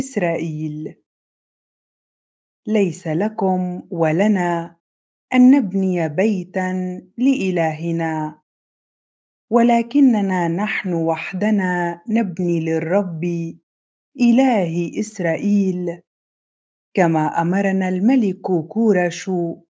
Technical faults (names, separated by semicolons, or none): none